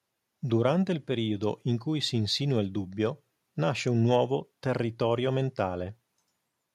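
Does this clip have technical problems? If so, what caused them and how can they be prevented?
No, nothing in this speech recording points to a technical fault. There is no problem to trace back to a cause, so no preventive step is needed.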